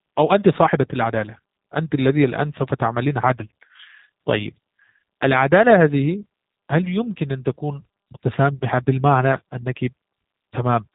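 G.729 codec damage runs throughout: speech rebuilt from a vocal tract model and sparse pulses, fitting 8 kbit/s coding, sounds rough, synthetic, and empty above 3.8 kHz.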